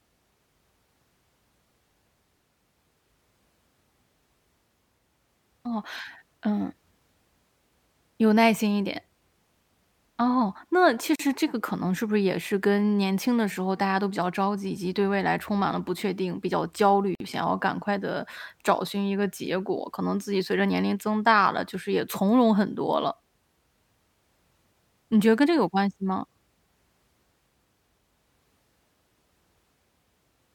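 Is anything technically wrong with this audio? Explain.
Yes. The speech runs across two gaps at a join of encoded pieces: from 11.16 to 11.19 s (about 39 ms) and from 17.15 to 17.20 s (about 51 ms). The audio was encoded in separate pieces and spliced without trimming, so the encoder's start-up delay and the padding on each piece's final frame stayed in. What you hear is a brief hole of silence with smeared edges, after which the speech picks up exactly where it left off.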